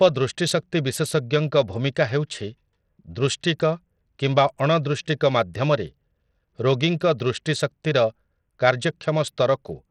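A speech recording that carries Bluetooth SBC compression damage from start to finish, plainly audible and likely from a starved SBC link. The treble flickers in and out rather than being cleanly cut, and a gritty, grainy noise with aliasing clings to the sound, which fits a small bit pool around 80 kbps. A simple low-pass filter would remove the top evenly and quietly, and perceptual codecs tend to swirl, whereas this is coarse, unmasked grit.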